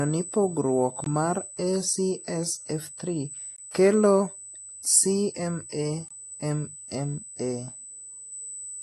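From the very start a thin, steady, high-pitched whine sits over the speech at 8 kHz, strongest right at that frequency and loud, only roughly 15 dB below the speech itself. Its pitch never drifts. This is USB whine: the bus schedules its traffic in 125-microsecond microframes, and the current drawn at that 8 kHz rate has leaked into the audio through the power or ground path.

Throughout the clip, the speech also sounds dull and smeared. Nothing is present above 12 kHz, and sibilants and sustained sounds carry a watery, warbling fizz that is plainly audible. This is most likely AAC compression, of the AAC-LC kind at a low rate that fits roughly 32 kbps. At such a rate the encoder lowers its cut-off and quantises the remaining frequency lines coarsely, leaving holes in the spectrum that shimmer from frame to frame.

At 1.04 s the sound drops out abruptly for about 21 ms, ending at 1.06 s, and the same hard-edged hole returns from 3.56 to 3.58 s. 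Both are gaps between chunks. The audio was delivered in 2.5-second pieces, and a short stretch of silence was inserted at each join. Because the content continues seamlessly after each hole, it is interrupted rather than cut, giving a brief, regular stutter.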